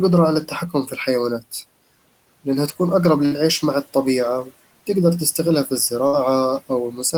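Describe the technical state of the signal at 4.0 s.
At 4.0 s the audio is intact, with only the room's own background noise sitting about 22 dB below the speech.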